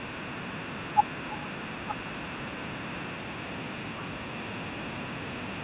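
A speech recording carries an echo with no canceller from start to finish. The far end is evidently playing the call through a loudspeaker, and its microphone sends that sound straight back, so every phrase is trailed around a third of a second later by a fainter copy, about 16 dB down, that sounds thinner. On a waveform each burst of speech has a smaller ghost burst offset by roughly 300 ms. A spectrogram shows each syllable's harmonic pattern repeated at that delay at lower intensity, smearing into what should be the gaps between words. The audio also has nothing above 4 kHz, which fits a narrowband telephone-style coding path.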